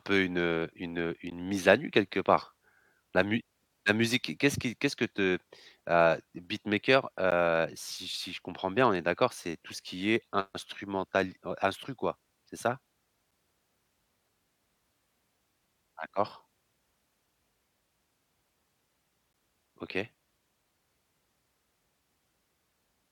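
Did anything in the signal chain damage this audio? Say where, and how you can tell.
Yes, there's a gap between stream segments at the streaming and playback stage. You hear short hard-edged dropouts to silence at 1.30 s (between "une heu une heu" and "mise à nu quelque"), 7.31 s (after "que te heu beatmaker", before "si si je comprends"), 13.31 s and 19.33 s. They're about 12 ms each, the third closer to 7 ms. They land every 6 seconds, so segment timestamps don't quite line up and the player pads the hole with silence. Nothing is actually lost.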